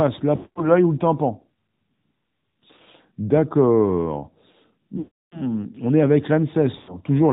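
Throughout, the speech carries AMR narrowband mobile codec damage, plainly audible buzzy, synthetic coloring consistent with the 10.2 kbps mode; spectrograms show nothing above 4 kHz. Lost AMR speech frames strike at 0.36–0.69 s, 4.98–5.59 s and 6.78–6.98 s: the decoder stretches the last pitch with falling gain, fading toward silence, visible as smeared harmonics and a decaying waveform envelope.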